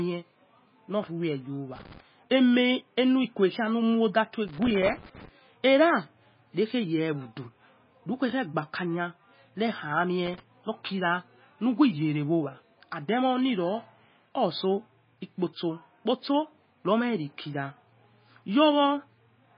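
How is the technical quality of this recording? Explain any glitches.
The technical quality is poor: the speech carries heavy codec damage throughout and three bursts of crackle.

Throughout, the speech sounds watery and swirly, with nothing above 5.1 kHz. The likely cause is MP3 compression at a very low bitrate, near 18 kbps. Starved of bits, the encoder drops weak frequency lines that flicker frame to frame and cuts the treble. A spectrogram shows a hard ceiling at 5.1 kHz and patchy, blocky gaps below it.

Loose connector crackle occurs at 1.76–2.00 s, 4.48–5.29 s and 10.26–10.40 s. A faulty contact rapidly makes and breaks, chopping the signal into an irregular scratchy burst, longest at the second event. The waveform shows jagged interruptions and spikes, and the spectrogram shows broadband vertical streaks.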